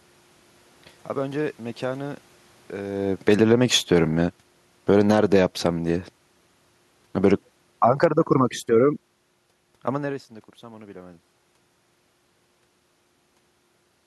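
From 2.99 to 5.89 s the automatic gain control decides the input is too loud or its background noise too strong and pulls its gain down by about 7 dB, so the speech and the room noise behind it sink together rather than the talker simply fading. The talker's own move around 3 s coincides with the start. Within that, from 5.25 to 5.71 s, the automatic gain rises by about 3 dB, a brief swell of voice and background alike. The automatic gain falls again from 7.16 to 10.21 s, by about 4 dB, dragging the speech and its background down together before the talker moves near 10 s.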